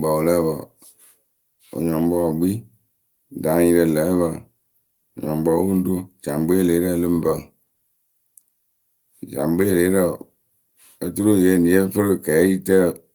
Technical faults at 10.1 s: none

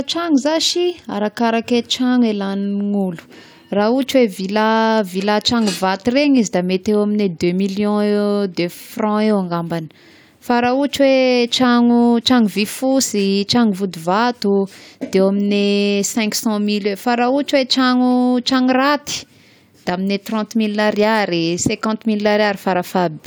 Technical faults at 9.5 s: none

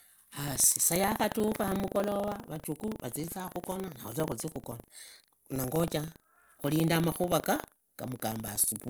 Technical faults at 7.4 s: buffer tearing

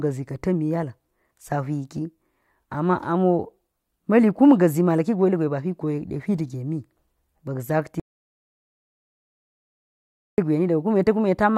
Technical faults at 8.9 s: audio dropout to silence

